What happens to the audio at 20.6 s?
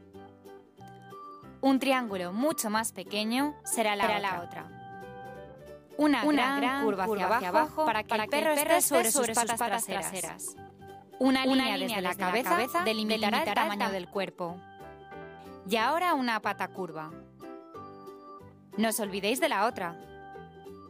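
Nothing goes wrong at 20.6 s; the audio there plays through intact, with no dropout, click or other fault.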